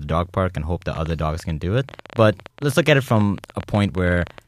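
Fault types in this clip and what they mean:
Train of clicks: a run of about 40 similar pulses from 0.95 to 4.39 s, roughly 11.7 per second at an uneven pace and peaking about 5 dB above the speech, likely from interference or a faulty connection. Unlike a single click, it keeps ticking through pauses.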